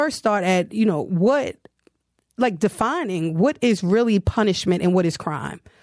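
No technical faults are audible.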